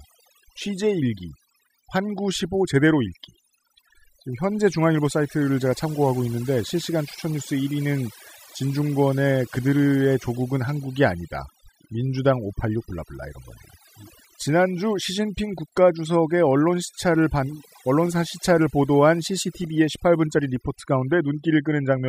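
Speech recording with overdone noise removal throughout: the noise reduction was set too strong, so frequency bands near its noise estimate are cut hard, taking quiet speech detail with them. The background drops and breaks up into twinkling specks.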